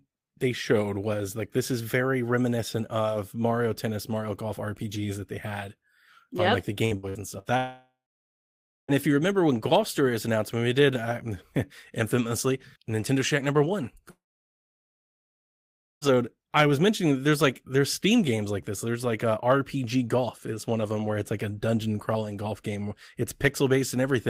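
Repeated packet loss (robotic sound) runs from 6.85 to 7.48 s, right after "yep on like the". Four short holes, the longest 62 ms, were each patched by extending the preceding sound, so about 38% of that stretch is synthetic fill, roughly 240 ms in all. The result is choppy audio with small pieces missing, one gap following closely on the next.

A long network dropout follows at 7.57 to 8.91 s. Roughly 1.3 s of audio is lost, most likely because nothing arrived from the network. The last sound is stretched into a fading buzz or hiss, then about 0.9 s of near-silence remains before the audio resumes at "if you remember when", with the lost part absent. A second long network dropout spans 14.10 to 16.16 s, starting after "number one". About 1.9 s is gone, likely through the same interruption in delivery. A brief fading carry-over gives way to roughly 1.8 s of silence before the audio returns at "I was mentioning that".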